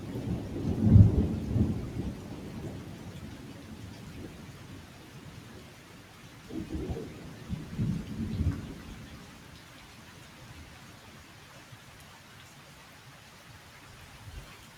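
A noise suppressor applied to music or sounds runs through the whole clip, treating sustained material as if it were background noise. Attacks come through largely intact, but held tones, ambience and decaying tails are pulled down by roughly 5 dB, so the sound thins and flutters between transients. Unlike compressor pumping, which tracks overall loudness, this ducking targets steady content itself, and unlike a gate it never closes fully to silence.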